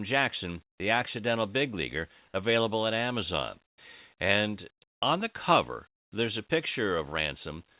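Speech carried over a call path with nothing above 4 kHz, which fits G.711 mu-law at 64 kbps. Comfort noise replaces the background at 0.68–0.80 s, 3.64–3.78 s and 4.90–5.02 s. Each span is a steady, featureless hiss, about 2 dB louder, about 17 dB quieter and about 26 dB louder than the real background, which otherwise sits about 59 dB below the loud parts. Unlike a noise gate, which leaves silence, this fills the pause with synthetic noise, likely from discontinuous transmission. Onsets clipped by the voice detector follow at 0.76–0.80 s (40 ms lost) and 3.76–3.78 s (20 ms lost). There the sound begins abruptly without its soft start, rather than breaking off mid-sound as in a dropout, likely because the detector reacted late.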